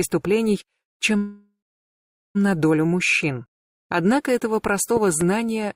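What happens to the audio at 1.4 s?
Packets were likely held up in transit, emptying the jitter buffer and causing a call audio freeze from 1.17 to 2.37 s. The last sound carries on as a fading buzz, then about 0.8 s of silence, before the audio resumes where it stopped, now about 1.2 s late.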